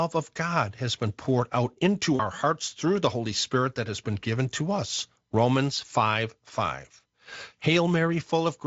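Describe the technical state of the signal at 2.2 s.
At 2.2 s the signal sits inside a burst of VoIP packet loss concealed by the speech codec, running from about 2.15 to 2.21 s. Roughly 40 ms of audio never arrived, which fits two 20 ms frames dropped, and the Speex decoder filled the gap by repeating its last pitch and spectral shape at falling gain. The speech briefly smears into a buzzy tone or coloured noise that fades, then stays weak as the decoder recovers.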